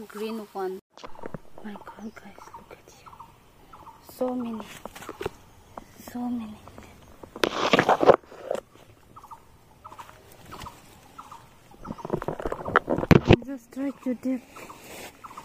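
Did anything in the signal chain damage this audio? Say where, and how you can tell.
No, nothing in the signal chain audibly damaged this audio. No stage from capture through to playback leaves a mark that can be heard.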